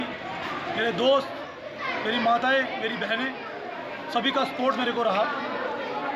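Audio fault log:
No technical faults can be heard in the audio; the signal holds steady and continuous from its first moment to its last.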